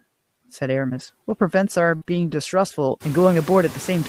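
Noise suppressor artifacts run through the whole clip. The suppressor pushes the steady background down by about 15 dB between phrases and lets it back up under the speech. On a spectrogram, the noise floor pumps with the speech, and the gaps between phrases show patchy, blotchy remnants instead of an even haze. From around three seconds the room noise itself rises by about 17 dB, sitting about 19 dB below the speech, which makes that pumping easier to hear.

From 0.99 to 1.09 s comes the first lost packet rebuilt from error correction. The lost audio was filled with about 60 ms of low-bitrate copies carried in the following packets, which points to a few lost packets. Nothing drops out, but the passage turns briefly rough and grainy, and a spectrogram shows blurrier, noisier harmonics there.

At 1.95 to 2.03 s a burst of packet loss removes about 60 ms. The receiver stretches the last sound for about 57 ms and fades it, giving a held buzz or fading hiss before the audio resumes further along. 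In the waveform, a repetitive, decaying stretch replaces the real signal.

Right after it, from 2.03 to 2.07 s, a short concealed packet loss leaves about 20 ms missing, patched with about 17 ms of continued sound. It is heard as a quick smear or wobble. On a spectrogram it shows as a thin, smoothed slice with a slight seam where the real audio returns.

Then from 2.07 to 2.33 s a second lost packet rebuilt from error correction supplies about 140 ms of low-bitrate copies, which suggests more lost packets. The sound stays continuous but coarse and noisier than the surrounding speech, with visibly smeared harmonic detail.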